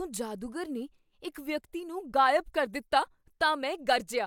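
Nothing in this speech recording points to a technical fault at any point, with the signal holding steady throughout.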